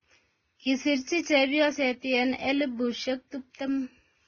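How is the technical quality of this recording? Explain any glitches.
The quality is limited, with audible coding damage throughout the speech. Transcoding between lossy codecs is the likely cause. Nothing sounds above 6.8 kHz. Smeared, watery Vorbis-style artefacts sit under Opus's own graininess. The later encoder re-coded the earlier damage rather than clean sound. The sound points to a low-bitrate Vorbis pass followed by Opus.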